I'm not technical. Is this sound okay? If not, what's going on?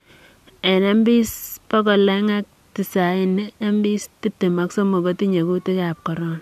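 Yes, the recording is technically sound, with nothing wrong to hear anywhere in it.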